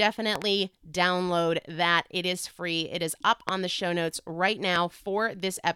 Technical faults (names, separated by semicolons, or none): loud pop